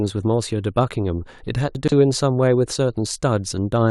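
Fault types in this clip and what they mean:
Chunks out of order: One block of about 43 ms plays three blocks too late, landing after the blocks that should follow it. Nothing goes missing, but from 1.75 to 1.92 s the speech briefly sounds jumbled. This leaves three hard joins.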